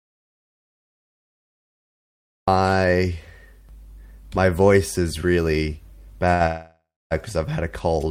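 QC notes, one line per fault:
0.00–2.48 s, audio dropout to silence: the clip opens with the input already gone, and there is silence with no room tone at all until the speech arrives at 2.48 s. That silent floor points to the source being cut off, likely a lost link or device, while recording carried on writing silence. Whatever was spoken during those first two and a half seconds is not recoverable.
6.33–6.42 s, short stall from a late packet: right after "my voice is really" the last sound is held for about 68 ms, with a faint buzzy smear instead of moving on. This is the receiver's jitter buffer running dry while one packet was late. It repeated the final fragment until the packet turned up and then resumed at the same point, so nothing is missing, but the timing slips by 68 ms.
6.46–7.13 s, call audio freeze: moments later a longer hold of about 646 ms follows. The stretched sound decays into a fading buzz, and the final 250 ms or so is silent before speech returns with "because I've had a". 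The likely cause is a burst of delayed packets that emptied the jitter buffer, leaving concealment to fill the wait. No speech is lost, but a gap of about two thirds of a second has been inserted mid-sentence.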